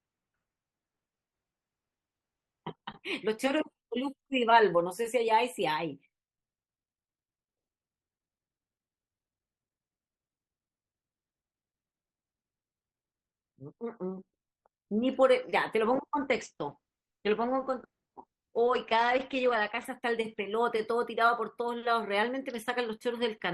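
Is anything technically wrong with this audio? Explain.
Yes. From 15.85 to 19.85 s there's an adaptive stream drop to a lower bitrate: the speech abruptly turns swirly, which fits the stream falling back to a low-rate version around 12 kbit/s.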